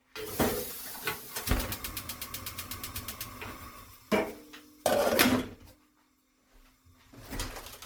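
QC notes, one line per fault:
Throughout, generation loss: the audio was likely re-encoded through MP3 around ten times, at a rate that fits roughly 97 kbit/s. Each pass requantises on a shifted frame grid, so noise and spectral holes pile up. The sound turns swirly, smeared and hollow, attacks blur, and nothing remains above 19.9 kHz.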